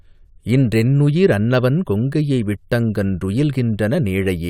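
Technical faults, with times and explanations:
Nothing stood out as a technical problem on listening to this speech recording.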